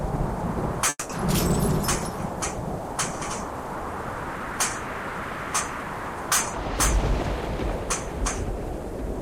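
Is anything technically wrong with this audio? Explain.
Yes. At 0.89 to 1.11 s the sound cuts out and a fading buzz fills about 200 ms, then brief silence. Likely a long network dropout, with that stretch lost.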